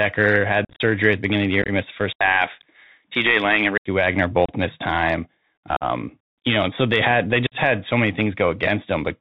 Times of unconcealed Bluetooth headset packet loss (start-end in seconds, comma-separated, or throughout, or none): 0.65-0.81, 1.62-1.70, 4.46-4.50, 5.76-5.83, 7.47-7.55